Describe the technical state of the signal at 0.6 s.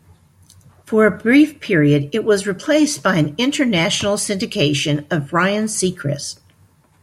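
At 0.6 s the speech signal is intact, with no audible fault at that moment.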